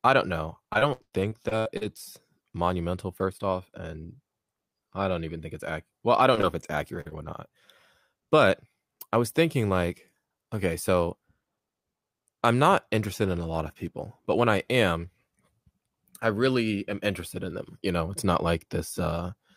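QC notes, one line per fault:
0.73–1.83 s, repeated packet loss (robotic sound): just after "I don't know", nine short holes follow one another, the longest 93 ms, and about a third of the stretch is covered by stretching the preceding sound. That gives a choppy sound rather than one clean dropout.
6.19–7.31 s, repeated packet loss (robotic sound): a lighter run of four gaps, the longest 45 ms, with about 9% concealed. It is a brief choppy stretch, still recurring rather than a single click or mute.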